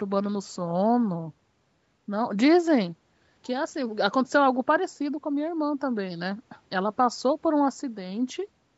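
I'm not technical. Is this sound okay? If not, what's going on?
Yes, this speech sounds fine, with nothing going wrong in it; the slightly narrow, phone-like quality, with the deepest bass trimmed and nothing above about 8 kHz, is just the normal microphone processing a call applies.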